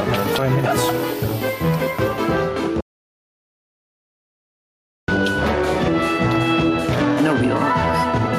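Gain pumping runs through the whole clip. The level swings by around 10 dB. Loud and quiet passages sit much closer together than they should, and the sound has a squashed quality. The likely cause is input gain set far too high for the microphone, with a fast limiter or compressor clamping down on every peak.

From 2.81 s to 5.08 s there is an audio dropout to silence lasting about 2.27 s. The sound cuts off abruptly and the gap is silent, with no room tone or noise floor underneath, before the audio returns mid-flow. Whatever occurred in that interval is lost. This points to the input signal disappearing while the recording continued writing silence, likely from a disconnected device, a failed link or an accidental mute.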